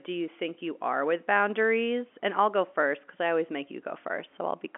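There are no technical faults to describe in time order.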